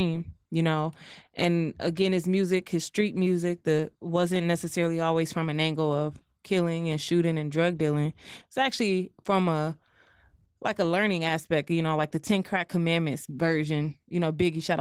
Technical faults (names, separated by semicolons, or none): Opus voice compression